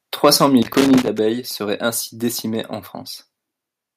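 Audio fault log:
0.24–0.46 s, microphone overload: The loudest stretch here has its peaks flattened, running about 3 dB past the converter's limit, with a small share of samples pinned at the ceiling. The likely cause is an input level set too high, so the waveform tops slammed into the converter's limit and were sliced off. Squaring the peaks adds a spray of odd harmonics, which gives those syllables their hard, gritty, crackling edge.
0.62–1.19 s, loose connector crackle: An irregular, scratchy burst of crackle runs for just over half a second and ends right before "seraient ainsi décimées en". A worn or dirty contact in the cable or jack keeps making and breaking as it shifts. Each break chops the signal, and any DC on the line jumps with it. That produces the uneven rattle of pops and scratches instead of a steady noise.
1.02 s, microphone volume stepped down: Sound and background both drop by about 6 dB in a single abrupt step, partway through the crackle burst. 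This is likely the call software's automatic gain control reacting to an input it judged too loud or clipping and lowering the device's input volume in one move. The gain change is instant rather than faded, so everything after it sits noticeably quieter. The room tone falls together with the sound.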